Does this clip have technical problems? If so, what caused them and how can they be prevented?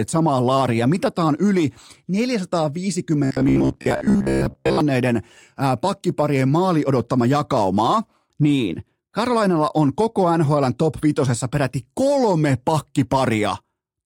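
Yes. From 3.25 to 4.81 s, audio likely arrived too seldom, so a roughly 15 ms buffer repeated over most real audio, causing robotic sound from repeated short buffers, a rigid metallic 66.7 Hz buzz. A larger jitter buffer and steadier delivery would prevent it.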